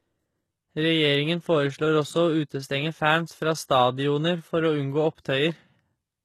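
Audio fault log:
Throughout, HE-AAC compression: the top end sounds bright but fake, with s sounds gritty and lispy, and nothing at all above 12.3 kHz. That's likely band replication copying lower bands upward, which fits a low bitrate around 16 kbps.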